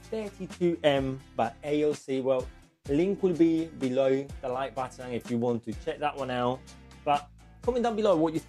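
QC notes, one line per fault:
The signal holds steady from the first moment to the last, with consistent level, continuous playback and no audible disturbance anywhere in the audio.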